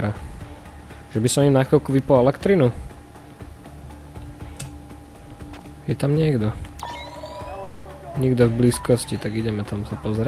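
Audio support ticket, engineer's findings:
Smeared buzz at 7.63 s, fading through to 7.87 s, then sound resumes with about 0.22 s gone. Likely a long network dropout: receiver's concealment stretched the last audio across roughly 220 ms of missing packets, never reaching silence, and playback rejoins later without the lost stretch.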